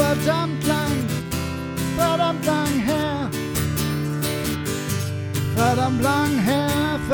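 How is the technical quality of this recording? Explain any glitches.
The technical quality of this recording holds up, with no glitches to explain.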